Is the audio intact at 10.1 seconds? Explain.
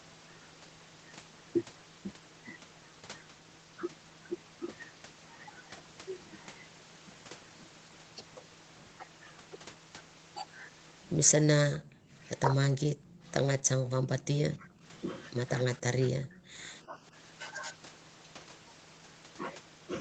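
Yes, the speech at 10.1 s is intact, with no dropout, glitch or other fault at that moment.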